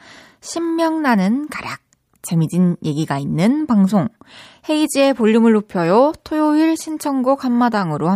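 No technical faults are audible.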